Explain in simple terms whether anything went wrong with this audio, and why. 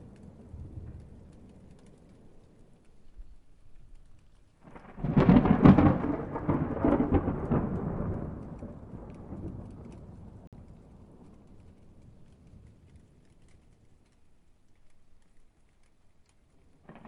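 At 10.47 s the sound drops out for about 50 ms, then carries on. That's likely a Bluetooth stall: wireless interference delayed the audio and the headphones briefly ran empty.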